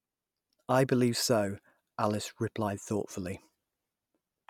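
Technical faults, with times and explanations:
No technical faults can be heard; the speech signal stays continuous and steady for its entire duration.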